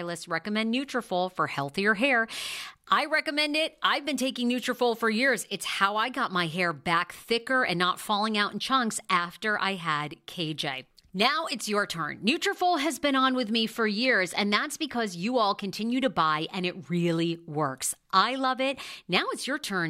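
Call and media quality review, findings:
Sample clock jitter, 2.67 to 6.05 s, right after "for healthier hair" and clearing by "got my hair back". Grainy hiss riding on louder, brighter bits of speech, gone in the gaps. Probable ADC/DAC clock: timing wobble of a couple of microseconds smearing steep waveform edges, error roughly 35 dB under the signal.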